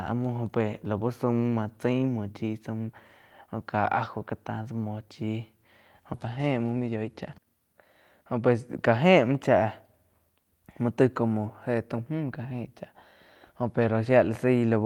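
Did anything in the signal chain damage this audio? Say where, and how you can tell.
Yes. At 6.13 to 6.15 s the speech lurches forward, with about a second of material gone and the two sides butted together with no gap. That is a skip ahead in the network or jitter buffer stage: audio was dropped while later packets were already queued.

Right after, from 6.25 to 7.47 s, the speech sounds slightly hurried, about 108% of normal speed, while the pitch stays unchanged. This is a jitter buffer speed-up. The buffer trimmed short pitch-period pieces, around a tenth of a second in total, to bring its backlog down.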